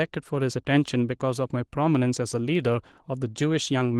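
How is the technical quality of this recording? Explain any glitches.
The speech is marred by a steady buzz from one fault, present for the whole clip.

Block size mismatch (truncated), throughout: one stage hands over blocks that fit 1024 samples, while the next reads slightly fewer, so a sliver is cut from each block's end. Every cut leaves a small discontinuity, and these repeat at about 43.1 Hz as a raspy buzz. So little is discarded that playback stays at essentially normal speed and pitch. Mains hum would sit at 50 or 60 Hz and sound smooth rather than gritty. A padded mismatch would insert gaps and slow the audio instead. The Opus voice coding at 20 kbps adds only light coding texture on top.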